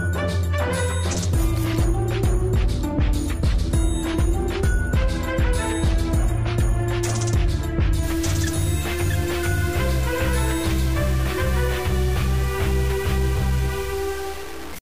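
From 8.03 s to the end, the audio turns grainy and gritty. The distortion follows the sound and changes with it. Quiet passages sputter or drop out. This is likely low bit depth without dither, fitting about 5 bits with truncation, leaving error roughly 20 dB below the signal.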